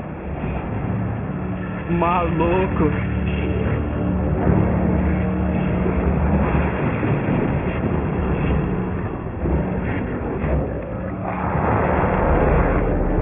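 Aliasing runs throughout: a hard 3 kHz band edge fits unfiltered downsampling to 6 kHz. Folded highs sound gritty and metallic, piling spectrogram energy against that edge.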